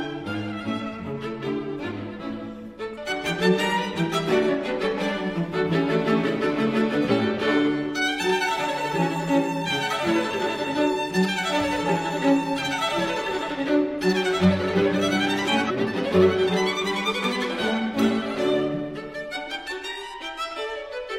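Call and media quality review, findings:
Damaged data in a compressed stream at 2.93–2.98 s, 7.06–7.12 s and 15.65–15.71 s: brief blips of about 55 ms. Decoder misreads the corrupted frames, loses sync and resumes at the next valid frame header.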